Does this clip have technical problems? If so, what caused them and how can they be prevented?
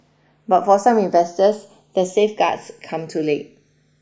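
Yes, the speech has channels drifting apart the whole way through. The left and right sides sound like they come from two devices on separate clocks, off from each other by something like 150 ppm. The gap between them creeps to about half a millisecond by the end. Fold that to mono and the comb-filter notches slide gradually through the spectrum, so you get a slow flanging swirl. To prevent it, lock both recorders to one shared word clock, or record both channels on a single interface.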